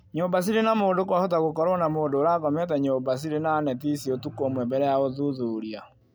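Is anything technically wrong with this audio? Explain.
No, nothing stood out as technically wrong when listening to this speech recording.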